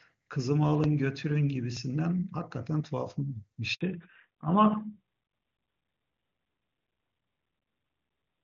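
At 0.84 s and again at 1.77 s there is a tiny forward jump in the speech rather than any silence. The first skips perhaps a millisecond or two, the second a few milliseconds. Both are most likely a dropped buffer (overrun): the software failed to read the samples before the hardware wrote over them, so that slice vanished and the audio on either side was spliced together.

From 3.75 s to 3.81 s the speech fades out fast and drops to silence for 60 ms before resuming. This is a handover gap. While the call switched from one network to another, no speech frames got through, so the decoder briefly faded the output and then had nothing to play until the new link delivered audio. Whatever was said in that window is gone.

When the sound returns at 3.81 s it is audibly duller and rougher, and it stays that way to the end. This is a fallback to narrowband. Before the gap, the call ran on AMR wideband (HD Voice) at a high rate, with crisp upper frequencies. 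After the handover it drops to AMR narrowband at 12.2 kbit/s, which carries nothing above 4 kHz. That removes the sibilance and air that had made the speech sound present.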